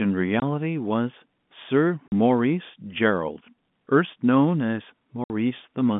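The speech cuts out at 0.40 s for 20 ms, at 2.08 s for 40 ms, and at 5.24 s for 60 ms. This is packet loss filled with silence. Missing packets became dead air. The gaps fit one, two and three 20 ms packets. Each gap has hard edges.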